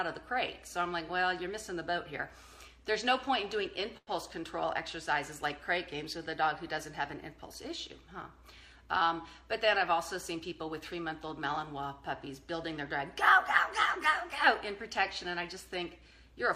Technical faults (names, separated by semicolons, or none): short stall from a late packet; jitter buffer speed-up